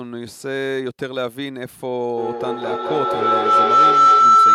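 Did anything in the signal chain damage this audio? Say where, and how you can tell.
Yes. Feedback howl takes over the speech from 2.17 s to the end at 4.54 s, rising to about 12 dB above the speech and settling on a tone near 1.5 kHz, with the loop repeating roughly every 200 ms. The damage comes from an acoustic loop between two devices on the same call, where each trip through microphone and loudspeaker adds gain. Ordinary echo repeats fade away. These grow, narrowing to the frequency the loop favours.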